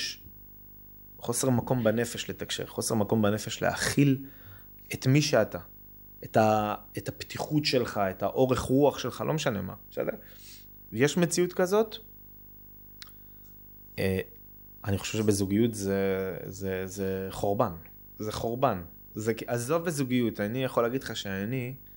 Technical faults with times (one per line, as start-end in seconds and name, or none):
0.00-21.97 video or display buzz